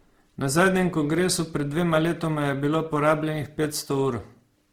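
Opus compression runs throughout this speech clip: the voice sounds rough and grainy, with noisy, fizzy texture where clean tones should be. That points likely to Opus's CELT music mode at a low bitrate around 16 kbps, refilling starved bands with folded or noise content while keeping fullband response up to about 20.3 kHz.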